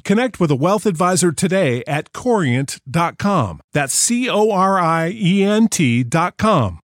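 No technical faults are audible.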